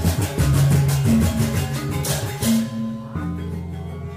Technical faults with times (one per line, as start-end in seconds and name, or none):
0.05-1.59 hard clipping